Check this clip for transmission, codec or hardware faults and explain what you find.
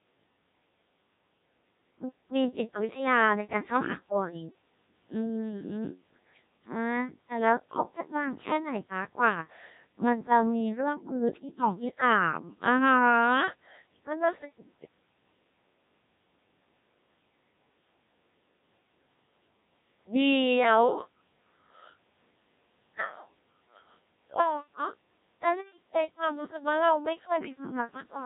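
The speech carries a Codec 2 vocoder fault throughout. Only pitch, voicing, energy and a spectral envelope survive, and the decoder rebuilds the voice from sine waves. The result is heavily robotic and buzzy, with nothing above 3.8 kHz, which fits a rate near 1.3 kbit/s.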